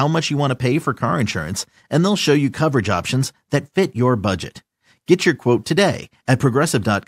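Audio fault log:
There is no fault in this speech audio.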